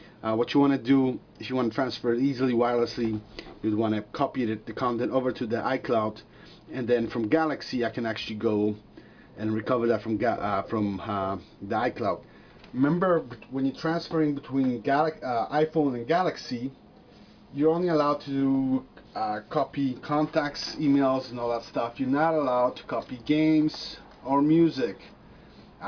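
There are no technical faults to describe anywhere in the clip.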